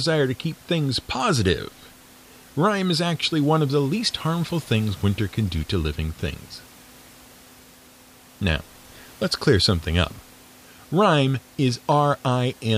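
No technical faults are audible.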